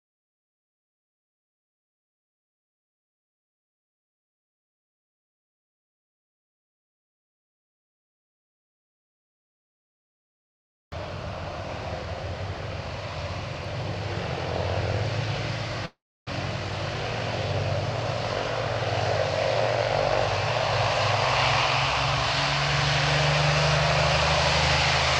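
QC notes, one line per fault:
15.85–16.29 s, call audio freeze: the sound stalls, its last moment smeared into a fading buzz, then about 0.3 s of silence before it resumes where it stopped, nothing lost but 0.41 s later. Likely delayed packets draining the jitter buffer.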